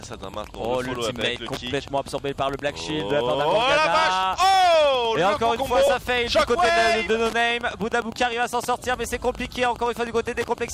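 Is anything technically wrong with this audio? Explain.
Yes, there are two faults. Wi-Fi interference runs throughout: a nearby radio's beacon, every 102.4 ms, is rectified by the audio circuit and heard as steady ticking roughly 20 dB below the sound, about ten times a second. Lost LE Audio frames occur at 5.87 s and 7.73 s, each about 10 ms long, which points to a single dropped frame. The LC3 decoder filled each gap by reusing the previous spectrum with randomised signs, leaving a brief noisy smear. The light lossy compression underneath is only faintly audible.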